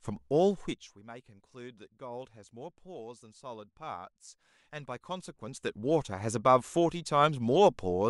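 From 0.49 to 1.02 s the speech drops by roughly 20 dB with zipper noise riding on it: the gain falls in 1 dB jumps, about 40 a second, and each jump leaves a tiny click. From 4.60 to 5.85 s the level climbs back by roughly 20 dB with the same zipping. That ticking texture is what separates zipper noise from a clean, seamless fade.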